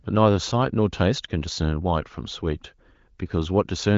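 No technical faults can be heard anywhere in the speech.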